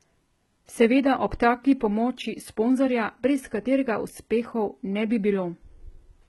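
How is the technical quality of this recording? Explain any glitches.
The recording is held back by heavy low-bitrate compression that runs through the whole clip of speech. Throughout, the sibilants sound gritty and lisped, and the upper range has a metallic, synthetic sheen. Nothing is present above about 11.8 kHz. The likely cause is HE-AAC compression at a very low bitrate, consistent with around 16 kbps. Only the lower band is coded directly. The treble is rebuilt by copying lower bands upward under a coarse envelope, so the harmonics above the crossover don't line up with those below, and the s sounds turn rough.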